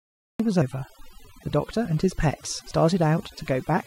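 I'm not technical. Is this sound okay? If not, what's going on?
No. The clip has three problems.

First, a cut-off start. There is dead silence until about 0.4 s, then the speech begins abruptly, partway through a sound, with no natural lead-in. The recording simply started late and missed the beginning.

Next, there are small jumps forward in the speech at 0.62 s, 1.86 s and 2.71 s. At 2.71 s the lost piece is longest, roughly a fraction of a syllable. These are likely dropped buffers (overrun): the recording program fell behind, a short chunk of audio was thrown away, and the pieces on either side were stuck together.

Finally, overdone noise removal affects the whole clip. The background is almost silent but full of faint twinkling specks. A noise reduction tool was set too strong and removed parts of the voice along with the noise.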